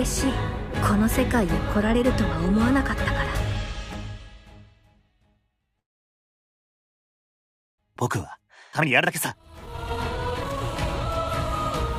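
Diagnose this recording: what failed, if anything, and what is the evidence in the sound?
At the network and jitter-buffer stage, the audio stops at 5.79 s and stays almost entirely silent until 7.80 s, a gap of about 2.0 s. It then resumes where it left off with nothing lost. This call audio freeze was likely caused by delayed packets draining the jitter buffer.

Once the backlog arrives, a jitter buffer speed-up runs from 7.94 s to 11.10 s. Playback is about 127% of normal speed at unchanged pitch and sounds hurried. The receiver repeatedly trims short pitch-period slices, shedding roughly a second of accumulated delay.

Within that stretch, a skip ahead occurs at 8.72 to 8.75 s. Playback jumps forward with almost no gap, and roughly a second of audio is missing. The two sides are spliced nearly directly, consistent with the buffer discarding queued audio to cut latency.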